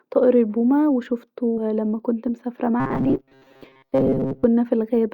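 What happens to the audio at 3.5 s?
Robotic sound from repeated short buffers spans 2.80–4.45 s: a likely replayed short buffer forces a metallic 133 Hz buzz, showing as rigid evenly spaced harmonic stripes.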